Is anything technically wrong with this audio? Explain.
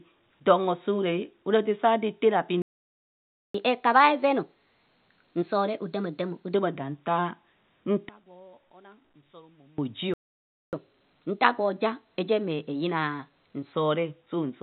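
Yes, there are a few problems. The sound is speech carried over telephone-style coding, and that band-limited, A-law character is what you'd expect from G.711, with nothing getting through above about 4 kHz. The trouble is in the playback.

First, there are two playback stalls. At 2.62 s the audio cuts out in mid-flow and stays silent for about 0.92 s, resuming at 3.54 s. It happens again from 10.14 to 10.73 s, a gap of about 0.59 s. The likely cause is the player running dry of buffered data, or its output thread getting held up, so nothing reaches the output until it recovers.

Second, each stall is followed by a catch-up at higher speed, where the player resamples its backlog to win back the lost time. From 3.54 to 6.54 s it runs 1.15 times fast, so the speech sounds hurried and roughly two semitones high. From 10.73 to 13.73 s it runs 1.1 times fast, about a semitone and a half up. 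Both times it then drops back to normal pitch and pace.

Third, between 8.09 and 9.78 s one channel is inverted. With one side's polarity reversed, the material shared by both channels cancels when they're summed to mono. The centred speech sinks by about 27 dB, leaving only a faint residue. It snaps back once the section ends. The likely cause is a polarity flip on one channel somewhere in the chain.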